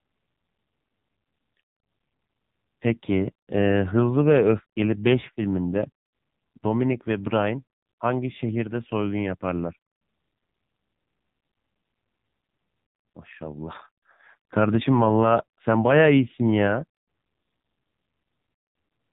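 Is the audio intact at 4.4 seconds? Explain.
No, at 4.4 s you're hearing the AMR narrowband mobile codec, which runs through the whole clip. The speech is cut off above 4 kHz and rebuilt from a vocal-tract model and a few pulses, so it comes out heavily buzzy and synthetic, which fits a low rate around 5.9 kbps.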